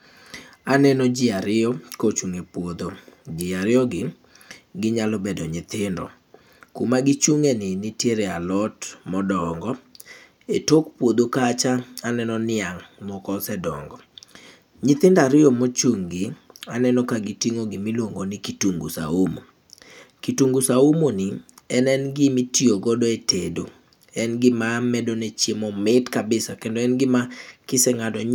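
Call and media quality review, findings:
No audible faults found in the speech recording; no action required.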